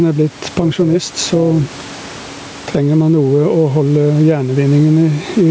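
Right from the start there's gain pumping: the level swings by around ten decibels, so the speech sounds squashed. The likely cause is gain set far too hot with a fast limiter clamping it back down.

From 0.42 to 2.48 s, overlap-add ripple kicks in: the level wobbles by about 6 dB at roughly 200 Hz, a metallic buzz. The frames were rebuilt with an overlap that doesn't sum to flat gain, so every frame boundary bumps the level.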